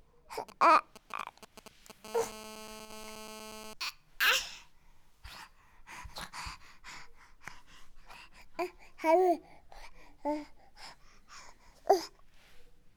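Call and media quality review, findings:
GSM signalling bursts, 0.49–2.06 s: galloping dit-dit-dit of short raspy buzzes, roughly 15 dB below the sound. Source: a nearby 2G handset in signalling mode. The audio circuit rectifies its radio pulses at a 217 Hz burst rate. Distinct from steady GSM buzz because the bursts come in short groups with gaps. Distinct from electrical crackle because the buzzes repeat in a regular galloping rhythm.

GSM phone buzz, 2.06–3.74 s: continuous hard, raspy 217 Hz buzz with dense harmonics, about 14 dB below the sound and unrelated to it. A nearby 2G handset in a call transmits bursts 217 times a second without a break. The input stage rectifies them. Distinct from mains hum: the 217 Hz fundamental and harsh harmonic edge rule out 50/60 Hz. It starts directly where the signalling pattern stops.

One channel drops out, 2.85–2.90 s: a 50 ms dip of about 6 dB in the mono sum, inside the buzz segment, with an abrupt start and end. 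Likely cause is a momentary loss of one stereo channel, which halves the content common to both channels. Distinct from a full dropout because the level halves rather than going silent. Distinct from gain riding because the step is instant and recovers cleanly.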